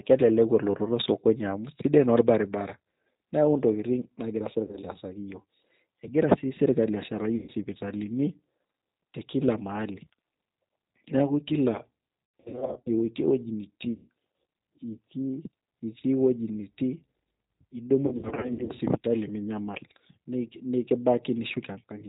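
Speech runs through the G.729 codec at 8 kbit/s, which resynthesises it from a filter and sparse pulses, leaving it band-limited below 4 kHz, rough and audibly synthetic throughout. VoIP packet loss concealed by the speech codec strikes at 4.67, 7.36, 12.40, 13.92 and 18.07 s: the decoder extrapolates missing audio, so sound smears into fading buzz, with the most audio lost across the long scattered gaps from 12.40 to 12.90 s and 18.07 to 18.81 s.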